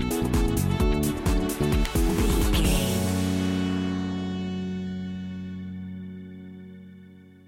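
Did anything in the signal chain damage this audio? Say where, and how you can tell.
Yes. At 1.85 s there is a single sharp snap, a spike peaking at about -15 dBFS sitting on top of the sound. This is an electrical switching spike picked up in the analogue wiring, likely from a nearby switch or motor arcing.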